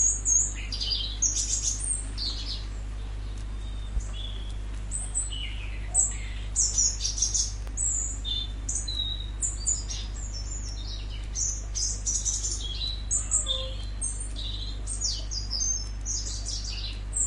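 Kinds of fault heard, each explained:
Loud pop: two single sharp thumps land on top of the sound at about 3.96 s and 7.67 s, each about 30 ms long. The first is much louder than the audio and the second noticeably less so. The sound carries on unbroken beneath each one, which separates a pop from a dropout or an edit glitch. The likely cause is a voltage pulse from a switch, plug or static discharge.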